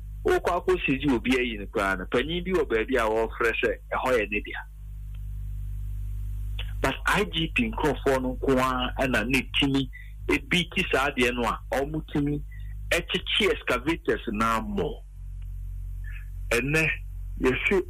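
From 14.32 s to the end at 17.89 s, the audio plays back at a wrong sample rate. It slows to about 0.92 times its speed and drops roughly 1.5 semitones, heavier and dragging. That fits 48 kHz material run at 44.1 kHz without conversion.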